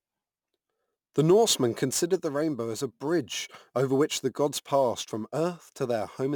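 A speech recording carries crude rate conversion from start to finish: a gritty, inharmonic fizz that rides on the louder and brighter parts of the speech, roughly 25 dB below them. The pattern fits a 44.1 kHz to 48 kHz change made by simply repeating the nearest sample. Unlike plain hiss or quantisation noise, the grit is absent in pauses and tracks the speech, with tones that bear no harmonic relation to it.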